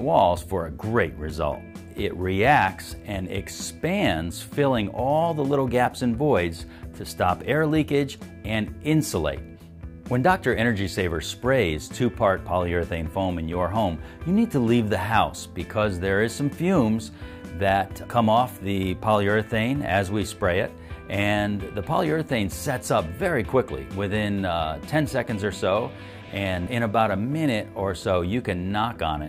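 Nothing is technically wrong with the clip.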